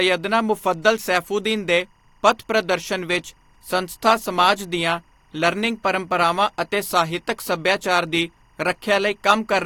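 Timecode bleed runs throughout: 24 fps linear timecode leaking in, switching between tones around 1 kHz and 2 kHz, a chirping warble roughly 40 dB below the speech.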